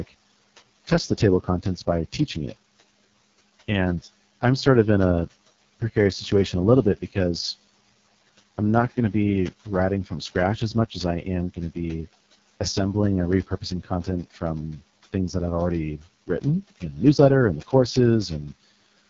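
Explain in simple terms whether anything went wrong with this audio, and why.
Something did go wrong: the whole clip, start to finish, has been squeezed through the AMR wideband (HD Voice) codec at one of its lowest settings. That makes the speech sound rough and raspy, with nothing above about 7.4 kHz. The quiet room noise underneath is just part of the recording.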